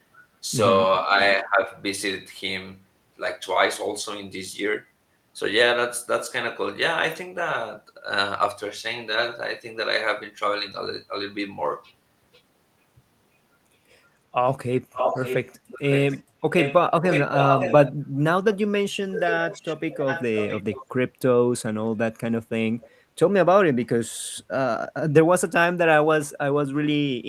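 Echo leak appears from 14.92 to 16.2 s, again at 16.58 to 16.74 s and 17.03 to 17.92 s. A delayed copy of the speech returns 555 ms late at about 5 dB below the direct signal. The far end was likely on a loudspeaker whose echo canceller let part of the pickup through. The echo shifts to a 655 ms delay at 19.11 to 19.76 s and 19.93 to 20.86 s, about 10 dB down. A last faint trace at 22.81 to 22.89 s sits about 30 dB down.

Speech suppressed in double talk occurs at 15.11 to 15.17 s, inside the first echo stretch. The talker's level dips slightly, by a few dB, over roughly 70 ms. The echo canceller likely could not separate the near talker from the returning echo during overlap and attenuated both, producing a brief soft notch in the speech.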